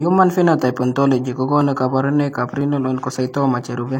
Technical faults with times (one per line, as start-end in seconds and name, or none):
0.61-3.61 clock drift buffer slips